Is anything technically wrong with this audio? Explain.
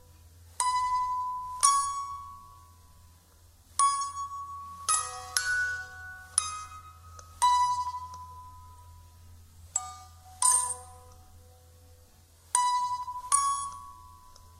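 Yes. At 7.87 s and 13.03 s there are jumps where the everyday sound skips ahead by about 10 ms, likely a dropped buffer (overrun), with overwritten samples lost and the edges spliced.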